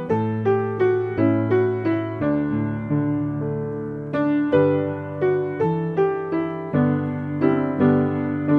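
No technical faults can be heard anywhere in the recording. Nothing breaks into the sound at any point, with no dropouts, clicks or sudden changes to mark a problem.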